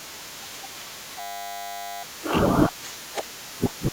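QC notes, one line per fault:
1.2–2.03 s, system hang loop. The system stalled while the sound hardware kept replaying its ring buffer. One 10 ms piece of speech repeats 83 times, giving a steady 100 Hz buzz. That fits a 10 ms buffer. Almost no speech is lost.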